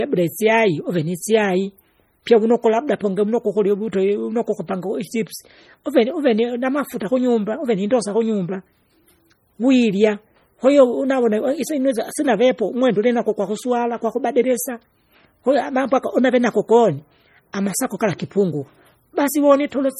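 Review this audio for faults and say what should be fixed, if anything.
Throughout the speech, the audio carries coarse MP3 texture, though content extends to 20.1 kHz. This is likely low-bitrate audio saved at a high bitrate: a heavily compressed MP3, around 32 kbit/s by its sound, was re-encoded at about 192 kbit/s, which cannot restore what was discarded. Prevent it by always encoding from the original uncompressed source rather than from an existing lossy file.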